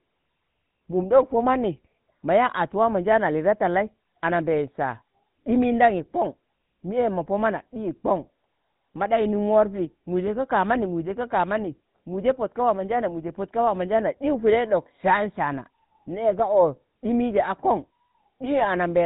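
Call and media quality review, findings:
GSM full-rate codec across whole speech clip, consistent with 13 kbps: pulse-train excitation, nothing above 4 kHz, so plainly buzzy, gravelly, muffled voice throughout.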